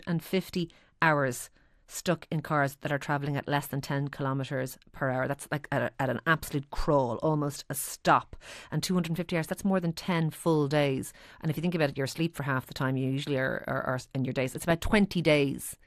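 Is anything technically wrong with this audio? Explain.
Yes. Throughout the speech, it likely went through MP2 compression at a low rate, which fits about 80 kbps, starving upper sub-bands so they switch off and flicker, leaving a dull, gurgling, granular sound.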